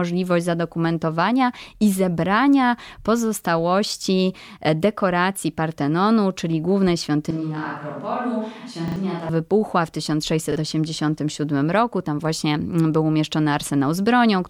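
It's a speech recording with two kinds of trouble. From 7.31 to 9.29 s, right after "czyli głównej" and until "wybuchła w", the sound suddenly goes roomy and hollow, thinner in the low end, roughly 5 dB quieter, with room noise sitting around 35 dB below the speech. That's the classic switch to a distant microphone, likely because the close mic's feed dropped out and something further away, like a camera mic, took over. Then it snaps back just as abruptly. Layered on top are two repeated buffer stutters. At 8.88 to 8.96 s a short chunk plays three times in a row with hard joins, which fits a 40 ms buffer being replayed when fresh audio didn't arrive in time, and about 70 ms of real audio goes missing. At 10.52 to 10.56 s the same thing happens once more, a single repeat of a 40 ms piece, costing about 40 ms. Both sound like brief stutters.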